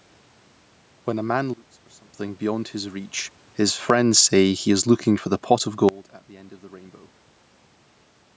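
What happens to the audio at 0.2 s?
At 0.2 s the speech comes through intact, with nothing wrong in the signal at that moment.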